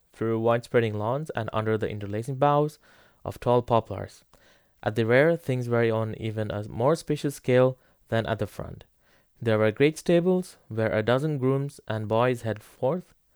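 A short speech recording, and no technical fault can be heard anywhere in it. Nothing in the audio points to a problem in the recording or playback chain.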